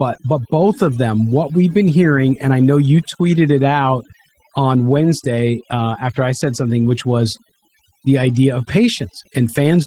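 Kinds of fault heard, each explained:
Overdone noise removal: aggressive denoising gates bands near the noise floor, leaving near-silent gaps with twinkling specks; the spectrogram shows patchy, holed speech harmonics and speckled dark background.
Opus voice compression: low-bitrate hybrid coding, which fits about 16 kbps, makes the speech sound hoarse and slightly robotic; the spectrogram shows smeared, blocky high-band texture.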